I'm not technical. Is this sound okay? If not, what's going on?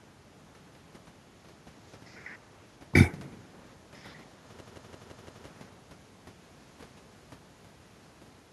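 No. From 4.61 to 5.46 s, one short slice of speech, about 0.17 s long, repeats five times in a row, about six times per second, like a rapid stutter. This is a system hang loop: the computer briefly froze while the sound hardware kept replaying its last chunk.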